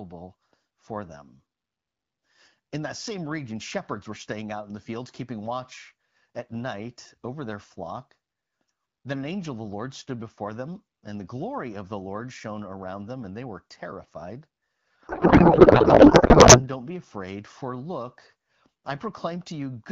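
From 15.07 to 16.63 s a codec payload misread replaces the speech with garbled noise and warble that barely tracks it. The AMR frames were packed octet-aligned but decoded as bandwidth-efficient, so the decoder reads every field from the wrong bits. A spectrogram shows the harmonics collapsing into smeared, noisy energy.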